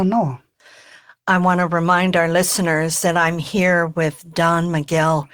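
No technical faults can be heard in the speech. Nothing in the recording calls for a timestamp or a repair.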